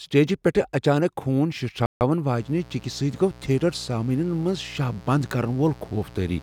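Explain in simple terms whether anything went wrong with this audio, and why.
Two things went wrong. At 1.86 s the speech stops dead and picks up at 2.01 s exactly where it left off. This is a rebuffering stall: playback ran out of downloaded audio and waited, adding about 150 ms of silence. From 2.36 s to the end, a steady, raspy 60 Hz mains buzz sits under the speech. Electrical switching spikes from a dimmer or poor shielding leaked into the signal.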